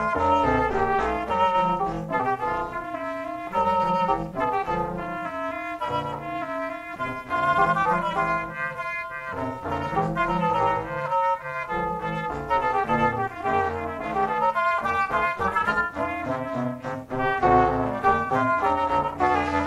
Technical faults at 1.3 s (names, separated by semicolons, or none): overlap-add ripple